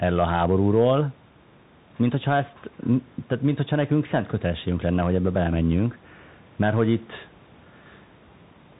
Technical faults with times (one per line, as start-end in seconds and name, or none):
0.00-8.80 Bluetooth CVSD headset codec